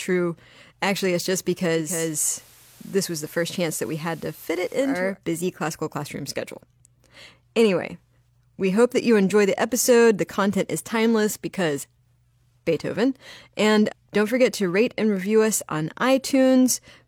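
From 1.71 s to 5.18 s, after "it's just", the speech shows digital radio blending to analogue: the receiver loses the digital stream and cross-fades over 450 ms to the FM broadcast. Hiss rises to roughly 25 dB below the speech, and the level drops about 1 dB before the return at "busy classical classroom schedule".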